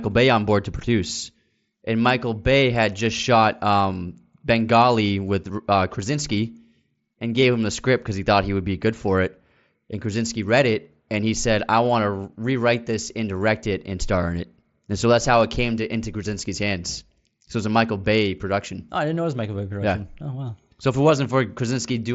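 There are no technical faults in the speech to describe, so there is nothing to set out in time order.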